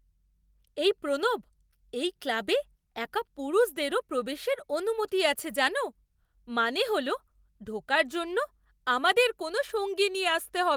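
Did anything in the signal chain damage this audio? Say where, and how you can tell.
No, nothing in the signal chain audibly damaged this speech recording. No stage from capture through to playback leaves a mark that can be heard anywhere in the clip.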